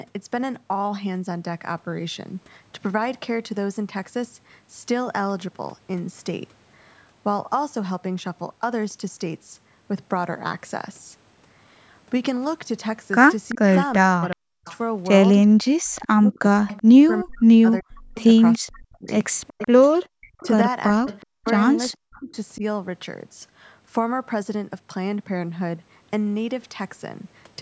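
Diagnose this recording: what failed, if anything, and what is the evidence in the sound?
A faint delayed copy of the speech trails it from 13.49 to 16.83 s and from 18.15 to 22.37 s, 380 ms behind and about 20 dB quieter. This is an echo leak at the call-processing stage, likely from an echo canceller that left loudspeaker pickup in the microphone signal. A spectrogram shows faint repeated formant patterns shifted 380 ms to the right.

Speech suppressed in double talk occurs from 13.54 to 14.66 s, 15.77 to 19.08 s and 20.41 to 22.62 s. The speech falls by as much as about 40 dB for roughly half a second, two seconds and under a second in total. The likely cause is the canceller attenuating both the echo and the near talker. The waveform shows sharp notches in the envelope, and the spectrogram shows gaps through every band.

The background is gated by the echo canceller from 20.07 to 20.13 s. 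For about 70 ms the room sound drops by about 40 dB while the canceller clamps the microphone, then it returns. The spectrogram shows a thin, dark vertical stripe across the noise floor, beneath content that stops at 8 kHz.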